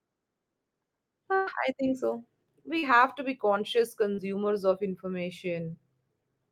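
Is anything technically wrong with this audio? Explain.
Yes, there are three dropouts from network packet loss.

The main one is a burst of packet loss from 1.35 to 1.50 s, right before "I think so". About 120 ms of audio never arrived in time. The receiver covered the hole by carrying the last sound forward for roughly 110 ms and fading it down rather than going silent. You hear a brief held, dying-off tail, and the speech jumps forward into "I think so" with the lost stretch gone.

There are also two cases of short concealed packet loss. One runs from 2.79 to 2.86 s, just before "to be conscious", and the other from 4.15 to 4.21 s, just after "to be conscious". Each lost about 40 ms. The decoder bridged each gap by extending the preceding sound for 30 to 40 ms, then blended back into the real signal. Each one comes across as a quick smear or wobble.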